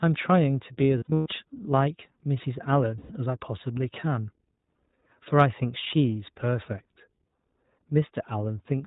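iLBC codec compression runs through the whole speech clip. The audio is band-limited to narrowband telephone quality, with nothing above 4 kHz, and the coding damage is plainly audible as a slightly rough, synthetic edge on the speech. Each short frame is coded on its own, without drawing on the previous one. The sound fits iLBC's 20 ms frame mode at about 15.2 kbps.

Lost iLBC frames first appear from 0.98 to 1.28 s. About 220 ms of audio goes missing, spread across this 280 ms stretch, and the longest unbroken gap is around a tenth of a second, which fits roughly eleven dropped 20 ms frames. The decoder fills each gap by repeating the last pitch cycle blended with noise, so the speech turns into a held, faintly buzzy vowel. A second loss at 2.98 to 3.12 s removes about 120 ms, consistent with six frames. Because iLBC frames stand alone, the speech recovers almost immediately after each gap.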